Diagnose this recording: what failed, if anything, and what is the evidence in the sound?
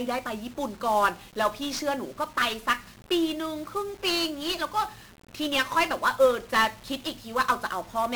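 The codec is the stage that failed: the whole 8-second speech clip has been through 1-bit DFPWM compression, and it's heavily damaged. From start to finish there's a dense, fuzzy crackle riding on everything, and the top end is smothered in hiss, so consonant detail gets lost. That's the quantisation noise of coding each sample as a single up-or-down bit nudging an adaptive level, and the grit is consistent with a rate around 48 kbps.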